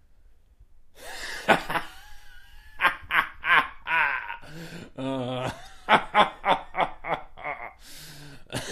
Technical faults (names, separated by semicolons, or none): damaged data in a compressed stream